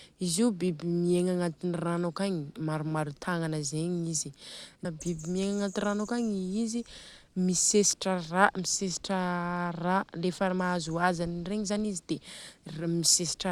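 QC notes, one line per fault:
4.85 s stream segment skipped: the speech jumps abruptly ahead with a tiny click, likely because one stream segment failed to load and playback resumed at the next, dropping that stretch. The waveform shows a hard discontinuity; the spectrogram shows a thin broadband vertical line.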